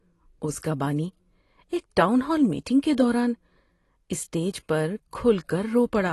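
From start to finish the speech is dull, with nothing above 12 kHz, and sibilants and held sounds carry a warbly, smeared fizz. A plain low-pass filter would not add that texture. The likely cause is AAC compression at a low bitrate, perhaps around 32 kbps.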